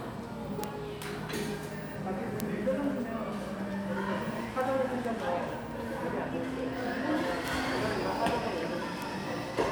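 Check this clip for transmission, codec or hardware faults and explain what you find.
One fault runs through the clip: word clock ticks. From 0.19 s to 9.69 s there is a steady train of sharp clicks, about five per second and around forty in all, some harder than others. The receiving device was running on its own clock, not locked to the sender's digital link, with a mismatch of roughly 100 ppm. Each time the two clocks slipped past each other, a single sample was dropped or repeated, leaving a brief discontinuity heard as a tick.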